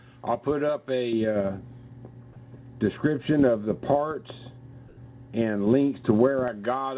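From 1.13 s to 6.48 s, de-emphasis applied wrongly tilts the response smoothly downward, about 11 dB lower at 10 kHz than at 1 kHz. The sound turns dull and muffled. A spectrogram shows upper bands progressively darkened, beneath the call path's hard ceiling at 4 kHz.

At 4.88 s to 4.97 s, a 90 ms gap in the background, sitting about 27 dB below the loud parts, is replaced by steady, featureless hiss about 5 dB quieter. This is likely comfort noise in place of the background, filled in while transmission paused. The waveform shows a flat, uniform band, and the spectrogram shows smooth, textureless noise.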